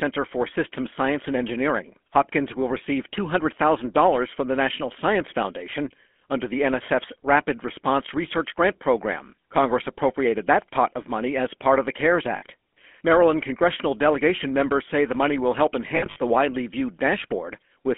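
Speech squeezed through the GSM full-rate codec the whole way, with a gravelly, buzzy edge and a band of only about 250 Hz to 3.4 kHz, which fits the 13 kbps full-rate mode. There are lost GSM frames twice: at 12.36 to 12.43 s a brief metallic smear holds the sound, and from 15.88 to 16.21 s a scattered cluster of rough, ringing repeats appears, the longest stretch being around 70 ms.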